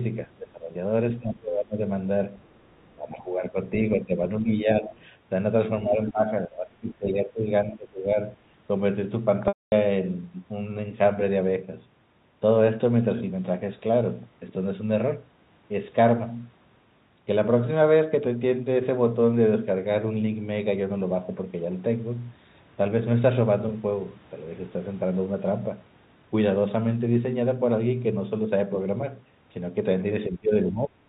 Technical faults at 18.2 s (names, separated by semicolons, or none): none